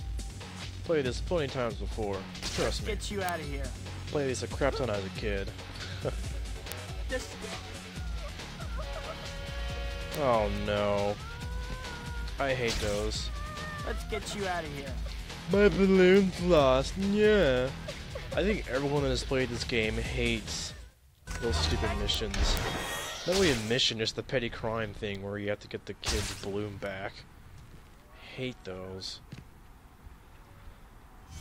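Word clock ticks run through the whole audio, from 0.29 s to 31.14 s: sharp clicks of uneven strength, roughly every 0.4 s, several dozen in all. Each tick is a single dropped or repeated sample where an unlocked receiver's clock slips against the sender's, on the order of 50 ppm apart.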